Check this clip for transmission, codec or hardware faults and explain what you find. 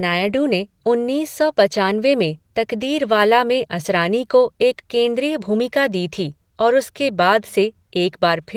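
Nothing faulty turns up in this speech recording. The Opus voice compression is in hybrid mode at 20 kbps with 20 ms frames and full bandwidth reaching about 20.2 kHz, and the coding leaves only light, expected traces.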